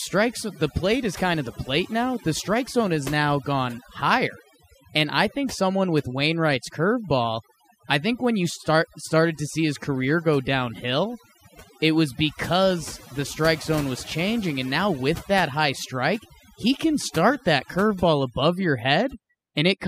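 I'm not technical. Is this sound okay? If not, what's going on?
No, not quite. All the way through, this speech has overdone noise removal: a cleanup tool was pushed too hard, so the background drops and breaks up into little twinkling specks, and quieter parts of the voice get stripped away.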